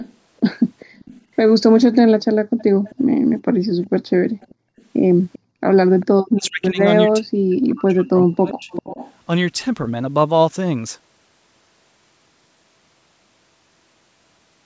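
A speech recording carries a hollow, phasey colour from start to finish: a channel delay (comb filtering) problem, where one channel runs a fraction of a millisecond behind the other and the two are summed to mono. Energy common to both cancels at evenly spaced frequencies, with the first notch around 3 kHz, so the upper presence region sounds scooped. The band tops out at 8 kHz, as expected from the call's microphone processing. From 0 to 6.47 s a faint delayed copy of the speech trails the original by 392 ms, about 25 dB down, and it returns more clearly between 8.7 and 9.13 s at about 15 dB below the speech. This is an echo leak, likely from a far end playing the call through a loudspeaker whose echo canceller let part of the pickup through and sent it back. Between 2.42 and 5.62 s the room tone dips, the deepest about 40 dB, adding up to roughly a second. That is background gated by the echo canceller, which clamps the microphone while the loudspeaker is active and releases it afterwards. 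From 6.26 to 8.7 s the talker's own speech dips, falling by as much as around 40 dB over roughly two seconds in total. This is speech suppressed in double talk, likely because both sides spoke together and the canceller, unable to tell its own talker from the loudspeaker echo, pulled everything down.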